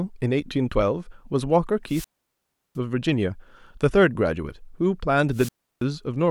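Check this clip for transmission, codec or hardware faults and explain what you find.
Two wireless microphone squelch dropouts break up the speech, from 1.86 to 2.78 s and from 5.31 to 5.83 s. The analogue FM link fades, hiss or static rises, and the receiver's squelch gate shuts the output, muting it for about 0.71 s and then about 0.33 s before the speech returns. On a waveform each looks like a flat gap. On a spectrogram it shows as a brief broadband noise wash, then a blank column.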